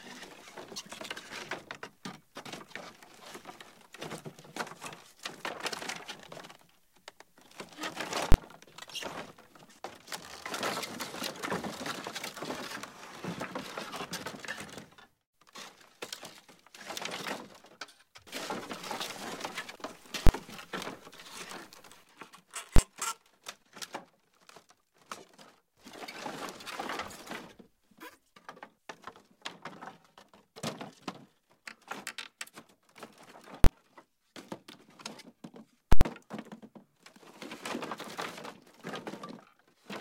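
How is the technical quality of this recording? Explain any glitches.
The recording has five loud bangs caused by invalid numbers at full scale. At 8.32–8.34, 20.27–20.29, 22.76–22.78 and 33.64–33.66 s, a calculation produced invalid values that were forced to an extreme value for about 21 ms, which fits a 1024-sample block. Each lands as one sharp bang. At 35.93–36.01 s the same happens for about 85 ms, fitting a 4096-sample block, and it is heard as a hard pop at each edge with silence between. A waveform shows flat slabs held at one extreme, far beyond the audio's peaks. A spectrogram shows full-band vertical bars at the block edges.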